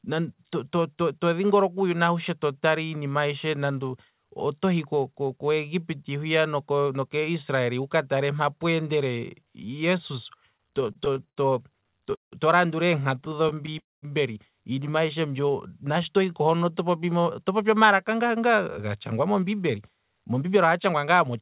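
Just after "tale mpa pweendele jesus", from 10.52 to 11.39 s, the speech breaks into repeated stalls (stutter). Twelve short holds, the longest 74 ms, stretch each sound while the jitter buffer empties and refills. A second bout runs from 11.81 to 12.34 s with seven holds, one lasting 170 ms, long enough to fade. Nothing is lost, only delayed, so the speech drags in jerks. That unevenness separates it from a smooth slow-down.

A jitter buffer slow-down follows from 13.14 to 13.62 s. The receiver repeats single pitch periods to build a reserve, adding 47 ms and playing at about 92% speed. The pitch stays put while vowels draw out evenly. From 13.21 to 13.77 s, six tiny stutter stalls overlap it, none longer than 13 ms. A second slow-down runs from 15.21 to 16.73 s at 90% speed and adds 156 ms. Because it is steady and gapless, it reads as languid rather than broken.

At 13.79 to 14.04 s the sound holds briefly, then fades into about 190 ms of silence before resuming exactly where it stopped. 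This is a call audio freeze, likely from packets stuck in transit, with 239 ms of delay inserted in one block. A single clean gap with nothing missing sets it apart from the scattered stutters and from a dropout that skips material.

From 18.22 s to the end, a jitter buffer speed-up trims repeated pitch-period slices to work off built-up delay, removing roughly a third of a second overall. Speech runs at about 109% with unchanged pitch and sounds slightly hurried. This is the mirror image of the earlier slow-downs. Throughout, the narrowband call path leaves nothing above 4 kHz, consistent with a 64 kbps G.711 A-law link.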